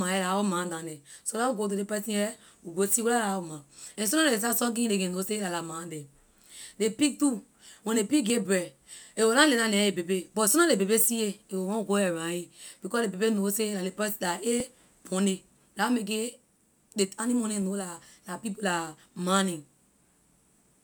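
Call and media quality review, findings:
Likely dropped buffer (overrun) at capture: samples overwritten before read, so the speech skips ahead at 8.30 s (about 20 ms lost) and 14.60 s (about 10 ms).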